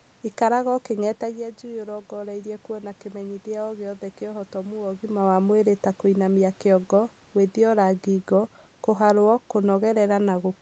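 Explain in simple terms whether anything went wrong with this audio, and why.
Something went wrong with the automatic gain control. Around 1 s the talker moved back and the voice got quieter, so it slowly turned its volume up until about 5.12 s, making the voice and the room noise behind it swell together over those four seconds.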